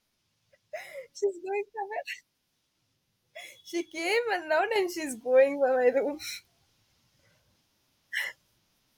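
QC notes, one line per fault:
4.76–8.98 s, sudden gain jump: just after "came and now", speech and background noise step up together by about 6 dB, likely a gain setting applied without a ramp; the waveform envelope steps abruptly.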